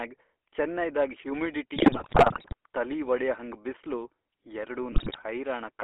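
Speech coded end to end with the GSM full-rate codec, whose pulse-driven vocal-tract model and roughly 13 kbps budget leave a buzzy, gravelly roughness over the whole clip, with the band held between about 300 Hz and 3.4 kHz so nothing above it survives. On top of that, GSM bit errors from 1.76 to 2.54 s and again from 4.92 to 5.25 s corrupt the decoder's filter, pitch and gain values frame by frame, so the sound breaks into squawks, pops and gargling bursts, a density that points to a badly degraded radio link.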